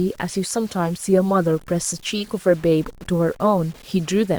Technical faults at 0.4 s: low bit depth without dither

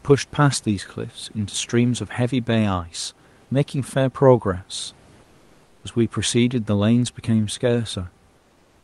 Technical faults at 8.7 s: comfort noise in place of the background

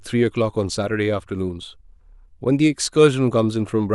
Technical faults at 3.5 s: none

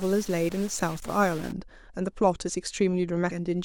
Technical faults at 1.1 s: stuck bit; damaged data in a compressed stream

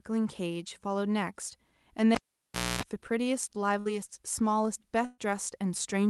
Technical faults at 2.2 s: cable pulled and plugged in

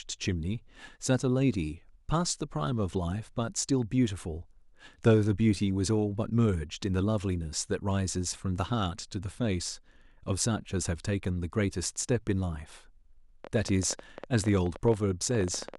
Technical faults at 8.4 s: none

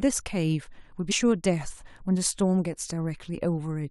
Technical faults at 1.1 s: damaged data in a compressed stream

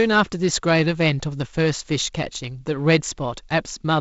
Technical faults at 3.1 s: none

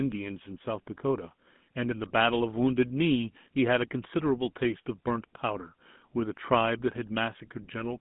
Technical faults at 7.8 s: GSM full-rate codec

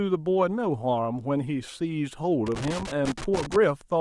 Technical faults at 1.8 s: none

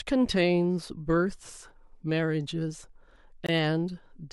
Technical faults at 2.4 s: none

